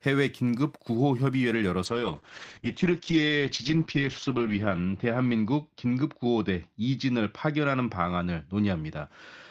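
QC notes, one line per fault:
1.87–9.50 s, call bitrate drop: the starved encoder codes coarsely, making speech watery, which fits a fall to about 9 kbps. The top end is cut from 20 kHz to 8 kHz.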